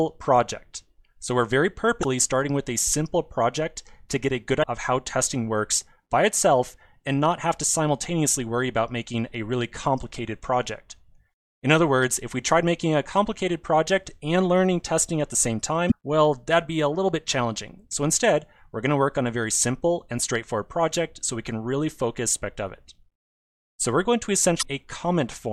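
Damaged data in the compressed stream causes brief glitches at 2.01–2.04, 4.60–4.64, 15.88–15.92, 22.31–22.35 and 24.59–24.63 s, each appearing as a thin vertical broadband smear with a waveform glitch where the decoder loses frame sync.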